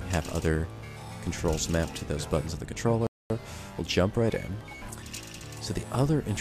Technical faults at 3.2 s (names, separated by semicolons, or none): rebuffering stall